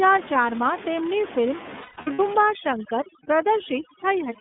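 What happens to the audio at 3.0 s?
Overdone noise removal is active at 3.0 s, within a stretch from 2.41 s to the end of the clip. A noise reducer set far too hard pushes any frequency band near its noise estimate down to nothing. The room noise, about 13 dB below the speech, collapses into near silence with twinkling specks, and the quieter parts of the voice are stripped away too.

The iLBC codec also shapes the sound at this moment, as it does throughout. The audio is confined to a narrow line band of roughly 200 Hz to 3.6 kHz, and each 30 ms frame is coded independently, which fits the codec's lower-rate mode. The result is clear but plainly rough, synthetic speech.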